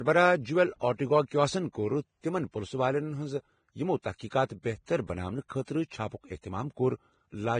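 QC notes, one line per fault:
Throughout, Vorbis compression. The speech sounds hissy and grainy, and nothing is heard above 9.7 kHz. The cause is likely heavy Vorbis coding at a low setting. The codec keeps a smooth outline of the spectrum and coarsely rounds the detail on top of it. In the treble that detail turns into noise of similar energy, so tones roughen. Attacks blur. The damage fits a bitrate near 23 kbps.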